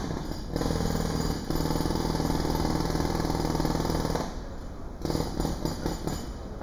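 Hollow, phasey everyday sound throughout, with a dull gap in the upper range. That is channel delay (comb filtering): one channel lags by roughly a fifth of a millisecond, and summing to mono cancels around 3 kHz and at evenly spaced frequencies above.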